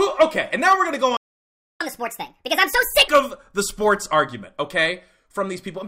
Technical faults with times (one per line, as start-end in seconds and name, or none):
1.17-1.81 playback stall
1.81-3.08 catch-up at higher speed